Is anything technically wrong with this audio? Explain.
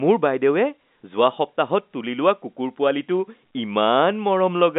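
No, the speech sits in an ordinary telephone-band channel consistent with G.711 coding, carrying roughly 200 Hz to 3.7 kHz with nothing above 3.8 kHz, and no fault can be heard.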